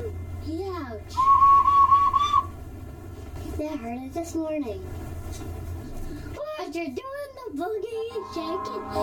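One channel of the music runs late by roughly 3 ms throughout, and summing it to mono with the other causes channel delay (comb filtering): evenly spaced notches from around 150 Hz upward carve the spectrum, leaving the whole track hollow and phasey.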